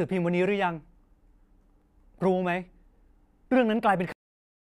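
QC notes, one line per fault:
4.12 s, cut-off end: the speech stops mid-sound and drops straight to digital silence for the final 0.49 s, with no decay or tail. The closing buffers were never written, so unlike a dropout the audio never resumes, and unlike a fade nothing tapers.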